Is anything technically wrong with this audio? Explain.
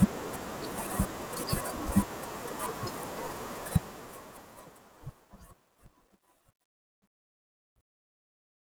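Yes. From 3.56 s to the end at 8.75 s, the fade-out shows truncation distortion on a fade. The fade stage keeps only about 11 bits with no dither. From 4.74 s the quiet tail turns into coarse steps, sounding gritty.

From 5.50 s to 6.46 s there is processor overload crackle. The processor kept missing its deadlines for very short buffers, around 3 ms each, some forty of them. Each miss replays stale audio with hard edges, heard as a gritty tearing crackle.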